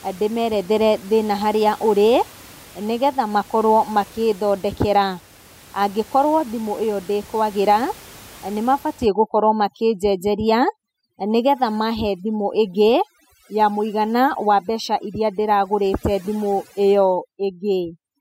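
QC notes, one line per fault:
9.06 to 18.21 s, overdone noise removal: from this point to the end of the clip, the noise reduction is set far too hard. The room noise sits about 24 dB below the speech. After 9.06 s it drops and breaks up into twinkling specks. Bands close to the noise estimate are pushed down or switched off, and the quieter parts of the speech go with them.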